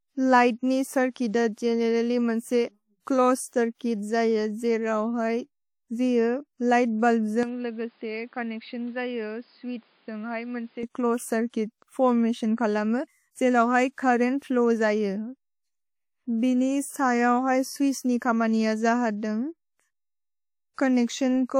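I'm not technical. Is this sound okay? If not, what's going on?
No. Throughout the clip, the speech carries the swirly, smeared traces of heavy compression, with nothing above about 19.6 kHz. This is likely low-bitrate audio saved at a high bitrate: a small, compressed file re-saved as a large one, which cannot restore what was lost.

From 7.43 to 10.83 s the speech turns dull and boxy, cut off above 5 kHz, noticeably quieter, with its own background noise, and with no gap at either change. The likely cause is the input switched to a poorer device, such as another microphone.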